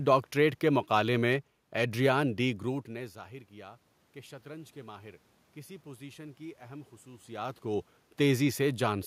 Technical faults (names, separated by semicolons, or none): none